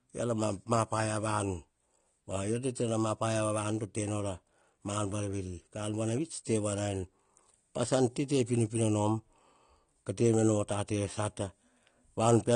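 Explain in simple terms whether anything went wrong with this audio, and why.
The speech was likely squeezed too hard by AAC compression, which throws away detail the ear is expected to miss. Everything above 10 kHz is gone, so from start to finish the speech sounds dull and muffled, with a smeared, warbly texture.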